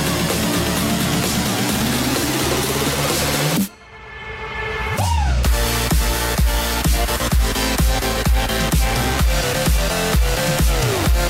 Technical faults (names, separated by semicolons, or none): dropped buffer (overrun)